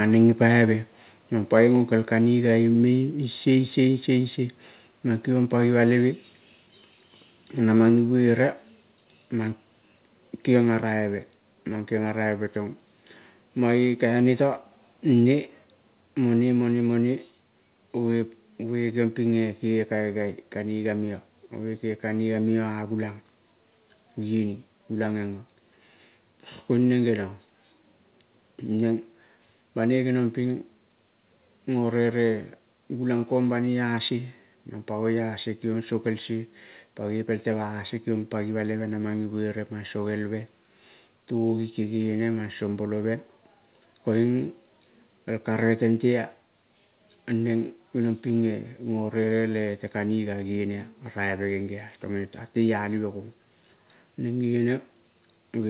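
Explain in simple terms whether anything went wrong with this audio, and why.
Something did go wrong: the recording most likely hit a microphone volume stepped down problem, where the call software judged the microphone too loud and turned its input volume down in one quick move. You hear this as sudden small drops in loudness at 2.04, 7.89 and 15.93 seconds. Both the speech and the background shift down together, the first drop being slighter than the later two. The narrow, telephone-like sound of the call line itself is normal.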